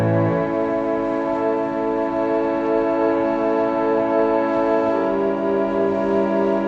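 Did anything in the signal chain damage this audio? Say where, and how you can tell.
No, no stage in the chain introduces damage that can be heard here. The audio has passed through a call path, and its top end stops at about 8 kHz, which fits an Opus codec limiting the bandwidth as it normally would.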